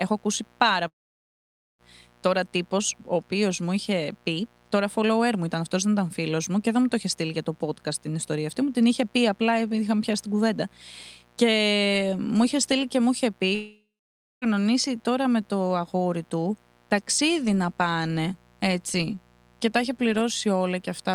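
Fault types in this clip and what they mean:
mains buzz: a steady, raspy 60 Hz buzz roughly 35 dB under the speech, drawn on a spectrogram as evenly spaced horizontal lines through the whole clip.
long network dropout: the audio cuts out at 0.87 s and 13.55 s, likely from lost packets; the waveform shows a brief fading tail, then flat near-silence for about 0.9 s and 0.6 s respectively.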